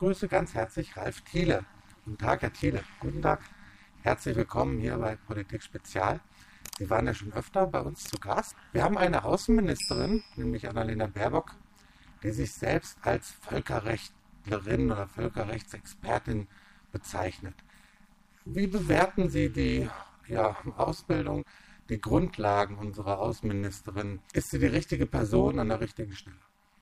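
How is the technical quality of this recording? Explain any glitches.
Technical quality is poor. Overlap-add ripple runs throughout: frames were rejoined with overlap that doesn't sum to constant gain, so level swings about 60 dB each frame, around 200 times a second, producing a harsh robotic buzz.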